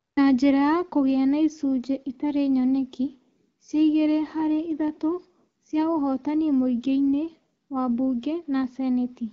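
A speech recording with no technical faults to report. It comes through the AMR wideband (HD Voice) codec at 12.65 kbit/s, which keeps the speech clear with only light coding character and a top end that stops around 7 kHz.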